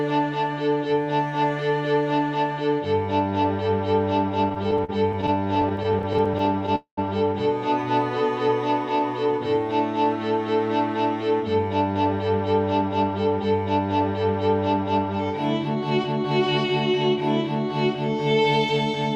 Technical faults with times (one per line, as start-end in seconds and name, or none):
4.49-6.69 repeated stalls (stutter)
6.75-6.99 call audio freeze
8.48-10.06 jitter buffer slow-down
11.95-16.65 jitter buffer speed-up